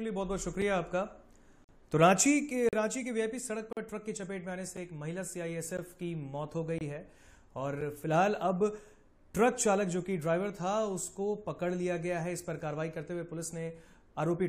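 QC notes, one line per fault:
0.62 s, 1.64–1.69 s, 2.69–2.73 s, 3.73–3.77 s, 4.77 s, 5.77 s, 6.78–6.81 s and 7.81 s: gap between stream segments. The sound drops to hard-edged silence at roughly one-second intervals, matching a 1.0 s segment length. The holes range from about 5 ms to 47 ms. Each segment's timestamp starts slightly after the previous one ends, and the player fills the difference with silence. Nothing is missing from the audio, but extra time is inserted at each join.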